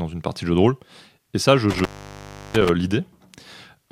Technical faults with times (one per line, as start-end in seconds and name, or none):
1.70-2.69 intermittent contact